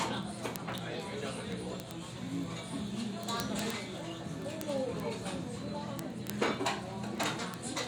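Word clock ticks run through this recording of everyday sound from 0.12 s to 7.87 s: a steady train of sharp, uneven clicks roughly every 30 ms, around three hundred in all. The device receiving the digital link was running on its own clock rather than locking to the sender's. The two clocks drift past each other, here by something like 700 ppm, and each slip misreads a few samples. The brevity of each tick fits a single sample being dropped or repeated every time.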